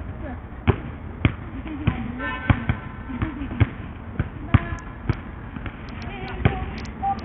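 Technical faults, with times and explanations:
Throughout, likely Bluetooth SBC compression: heavy damage, with treble flickering out under gritty noise, fits a starved bit pool near 48 kbps leaving the top sub-bands without bits.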